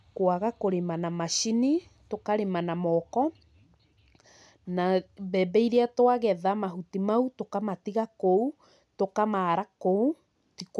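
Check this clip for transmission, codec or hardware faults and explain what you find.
Nothing wrong turns up anywhere in this speech recording.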